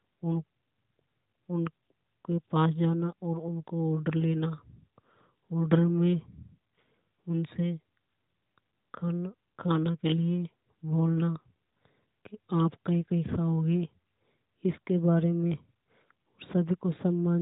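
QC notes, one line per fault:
No faults found on this speech clip; the narrowband mobile-codec band limit sits near 3.8 kHz, as expected for that path.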